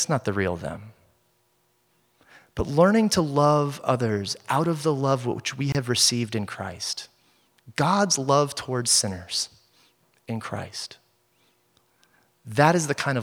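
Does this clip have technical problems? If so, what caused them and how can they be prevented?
Yes, a gap at a join of encoded pieces: 26 ms of silence at 5.72–5.75 s, between "the love which we" and "received in," because the encoder's start delay and end padding stayed in. Trim those before joining, or encode everything in one pass.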